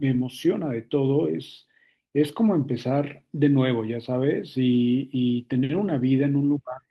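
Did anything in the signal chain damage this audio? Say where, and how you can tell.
Yes, at the network stage, with the codec covering the damage. There are two instances of lost packets rebuilt from error correction: a brief rough, noisy patch at 4.73 s, and a longer one from 5.73 to 5.79 s lasting about 40 ms, which fits two separate 20 ms packets. Neither leaves a gap. Each missing packet was replaced by the low-bitrate copy carried in the next packet, so those frames sound coarser and grainier than the surrounding speech.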